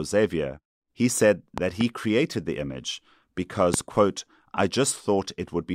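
A double loud pop at 1.58–1.83 s and a single, louder one at 3.74–3.76 s jump well above the speech, likely from voltage spikes such as switch or static discharges.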